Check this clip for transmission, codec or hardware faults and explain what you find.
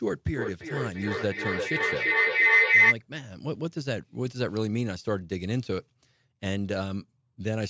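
There is one fault. A feedback howl runs from 0.34 to 2.99 s. A microphone-to-loudspeaker loop gains level each pass, repeating roughly every 300 ms and building a tone near 2 kHz that peaks about 10 dB above the speech.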